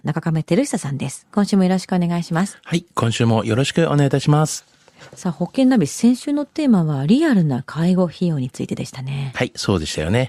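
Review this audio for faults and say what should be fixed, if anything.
Nothing needs fixing: the recording's signal path comes through intact, with no technical faults to address.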